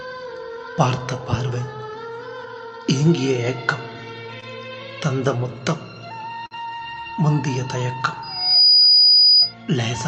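The audio has come through a call path with the top end cut off around 8 kHz, and it picks up two short stalls from a late packet. At 4.40 s the jitter buffer runs dry and the receiver holds the last bit of sound for about 19 ms. At 6.46 s it happens again, held for about 47 ms, until 6.54 s. Nothing is actually lost either time. The sound just hangs a beat, then resumes where it left off, a little later than before. The bigger problem is a loudspeaker feedback squeal from 8.22 s to 9.54 s. A single tone at 4.9 kHz swells up over something like 0.4 s and ends up about 10 dB above everything else. That's the mic catching its own speaker output, with the loop gain tipping past one at that frequency so the tone keeps feeding itself until the amplifier limits it or the loop is broken.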